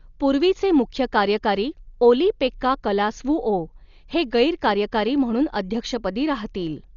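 Throughout, the speech stops above 6.9 kHz and rough dither noise flutters around tones, likely from heavy Dolby Digital compression. Noise fill rather than MP3-style swirl distinguishes it.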